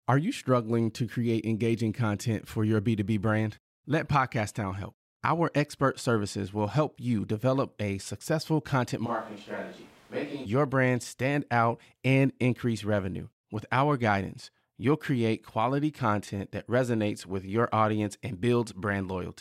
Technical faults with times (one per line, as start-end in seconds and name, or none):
9.07-10.44 switch to a distant microphone